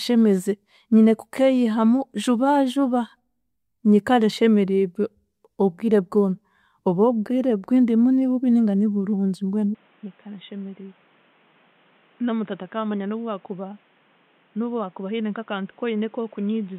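Speech clip in which, from 9.75 s to the end, the sound abruptly turns duller and quieter with no gap, likely an input switched to a poorer device. A spectrogram shows everything above 3.8 kHz vanishing; the waveform steps down by roughly 10 dB, over a new noise floor some 30 dB below.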